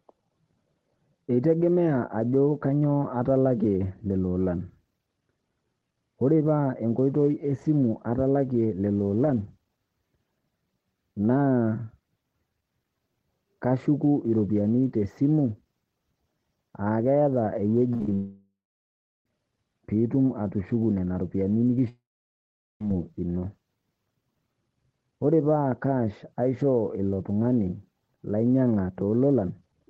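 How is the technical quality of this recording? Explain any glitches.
The speech has clear network glitches in the second half.

From 17.93 to 18.12 s there is repeated packet loss, giving a robotic sound. Six short gaps, up to 34 ms each, are patched by repeating sound. The result is choppy, with pieces missing.

Two longer gaps follow, at 18.14–19.26 s and 21.89–22.81 s. The likely cause is a long network dropout. A brief fading buzz gives way to silence, and speech resumes with a piece missing.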